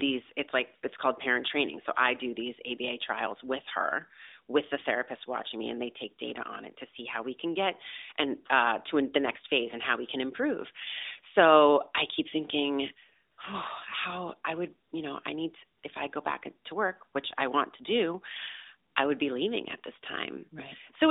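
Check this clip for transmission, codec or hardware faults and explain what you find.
Four short AMR comfort noise gaps appear in this narrowband mobile speech, which is band-limited to roughly 300 Hz to 3.7 kHz. They occur at 13.32–13.38 s (after "so i keep thinking"), 14.88–14.92 s, 15.78–15.84 s (before "if i go back") and 18.90–18.96 s (before "I would be leaving"). In each, the encoder judged the talker silent and stopped sending speech frames for 40–60 ms, and the receiver substituted smooth synthetic noise for the real background.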